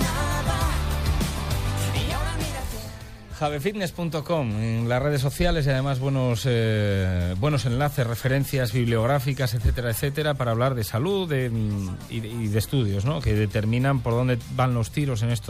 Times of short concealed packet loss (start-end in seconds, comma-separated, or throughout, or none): none